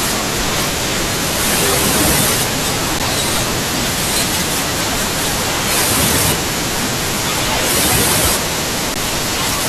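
An underrun with held sample occurs at 2.99 s and 8.94 s: the output buffer emptied and the converter held its last value for about 12 ms, then 15 ms, flattening the speech briefly before playback resumed seamlessly with only a soft edge.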